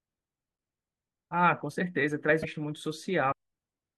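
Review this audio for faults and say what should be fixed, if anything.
Broken MP3 bit reservoir at 2.42–2.45 s and 3.31–3.33 s: brief glitches, each about one 26 ms frame long, likely from cut frames that leave the following frame's look-back data pointing at the wrong bytes. To prevent this, cut MP3 streams only with frame-aware tools that preserve reservoir data, or edit the decoded audio and re-encode.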